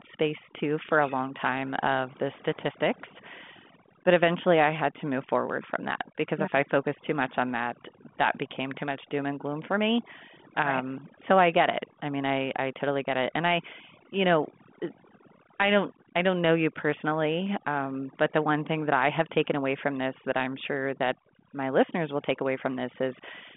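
Speech over a background that drops away and breaks up into twinkling specks runs through the whole recording: the sign of overdone noise removal. A noise reduction stage set far too aggressively pulls down or mutes individual frequency bands whenever they sit close to its noise estimate, so the background noise drops along with the quieter, softer parts of the voice. The audio also arrives through a narrow telephone band, roughly 150 Hz to 3.5 kHz with nothing above 3.8 kHz, which fits a 40 kbit/s G.726 ADPCM link adding little or no audible coding damage of its own.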